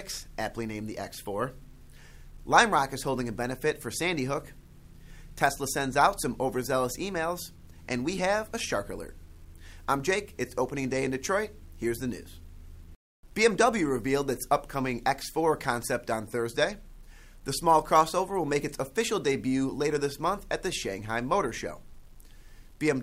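Low bit depth without dither runs from start to finish. The audio was likely rounded to about 10 bits with no dither added, so the quantisation error tracks the signal instead of behaving as a steady hiss. It sits roughly 40 dB below the sound and comes across as a grainy, gritty distortion that shifts with the material, coarsest in quiet passages, where the quietest detail sputters between a couple of levels or drops to silence.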